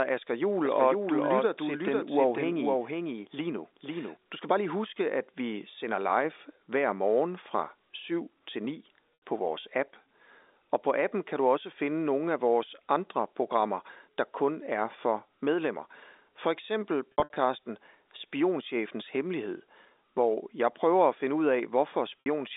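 From 0.65 to 4.17 s, the same speech was likely mixed in a second time through a slower path, producing a doubled audio track: a full-band copy trails the original by about half a second, roughly 5 dB quieter, with no room colour, and it starts and stops abruptly.

Packet loss with pitch repetition occurs three times. The receiver bridged each gap by repeating the last pitch period and fading it out. At 9.14 to 9.22 s, 80 ms went missing, which fits four 20 ms packets. The speech briefly holds on a buzzy, sustained tone. From 17.12 to 17.36 s, 160 ms was lost in scattered runs of up to 60 ms, giving several short buzzy holds and dips. At 22.20 to 22.26 s, a 60 ms loss leaves another brief held buzz.

Throughout, the G.711 telephone coding keeps the speech within the narrow 300 Hz to 3.7 kHz line band.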